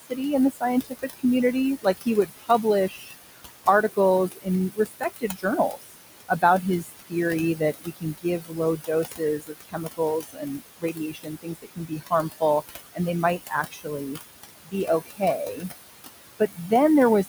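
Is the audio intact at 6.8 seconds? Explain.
No. 6.8 s falls inside the stretch from 1.82 to 15.7 s where there is speech cut by the noise suppressor. It mistakes soft consonants and word endings for noise and pulls them down by as much as about 22 dB, roughly five seconds of sound in all. Those parts come out swallowed or faint. A dropout would leave a hard gap, but here the loss follows the quiet parts of the speech.

Noise suppressor artifacts also run through the whole clip, including 6.8 s. The suppressor lowers each band it judges to be steady noise by about 18 dB, frame by frame. The room noise, about 11 dB below the speech, sinks between phrases and comes back under them. Steady hiss or hum would stay level, while this noise floor rises and falls with the speech.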